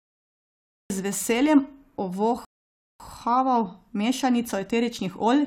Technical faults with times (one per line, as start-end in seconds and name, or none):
0.00-0.90 cut-off start
2.45-3.00 rebuffering stall